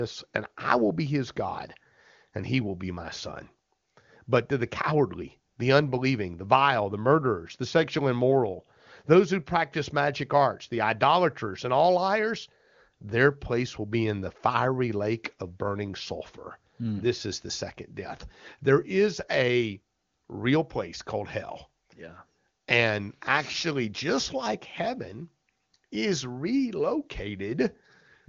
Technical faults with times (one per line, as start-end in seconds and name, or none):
none